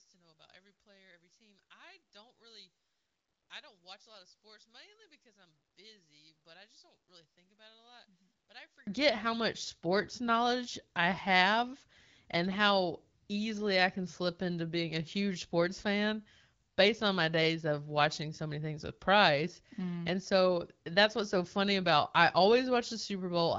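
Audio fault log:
0.0 to 8.87 s, one channel inverted: the speech drops about 27 dB until "how much sports knowledge". One channel's polarity is likely reversed, so mono summing cancels it.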